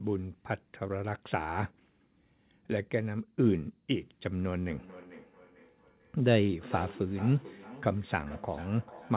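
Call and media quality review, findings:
Feedback echo between two devices, 4.7 s to the end: speech comes round again roughly every 0.4 s, thin and ringy, peaking about 17 dB under the speech. A second device in the room replays it into this mic, and the local AEC can't cancel it.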